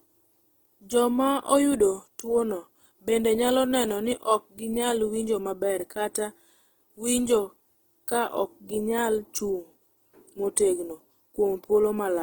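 Throughout this speech clip the sound is grainy and rough, with tonal parts turned noisy rather than swirling, and content still reaching about 20.1 kHz. This is likely Opus compression in its music mode, filling starved bands with noise, which fits a low bitrate around 16 kbps.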